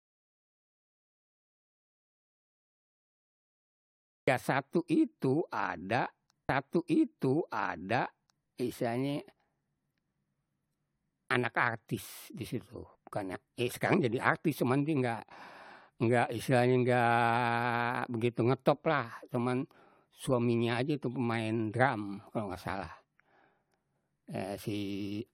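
The clip opens inside an audio dropout to silence that lasts until 4.28 s. For those first seconds the signal is silent, with no room tone or noise floor, and the speech starts abruptly mid-flow with "satu itu ada istilahnye". A gap this clean, with no fade, likely comes from the input being lost at source, through a disconnect, a failed link or a mute, while the recorder kept writing empty samples. Whatever was said during that span is unrecoverable.

From 6.48 s to 8.48 s there is a stream segment repeated. Just after "satu itu ada", playback jumps back and replays roughly two seconds of speech, adding about 2.0 s to the running time. A short blip marks the discontinuity at the jump, where the splice lands mid-waveform. The duplication points to the player fetching or queuing the same chunk twice rather than any fault in the recording itself.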